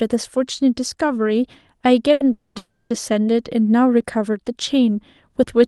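At 2.13 s a packet arrived late and the jitter buffer ran dry, causing a short stall from a late packet. The receiver held the last sound for 70 ms until 2.22 s, then resumed at the same point, so that sound drags with a slight buzz or dip. At 2.32 s the audio stops advancing, likely a call audio freeze from packets delayed in transit draining the buffer. It is stretched into a fading buzz or hiss for 230 ms to 2.57 s, then 330 ms more to 2.92 s, without falling silent, and resumes where it stopped.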